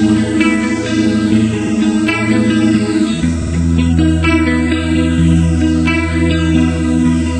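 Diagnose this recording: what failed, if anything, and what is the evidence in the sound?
Repeated frames at the codec or storage stage: a 52 ms block plays twice at 1.66 s and three times at 3.41 s, causing audible stutters.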